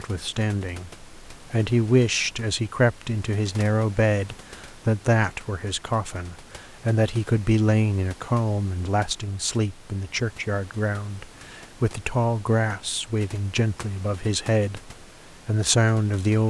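The clip is speech, and nothing is technically wrong with it.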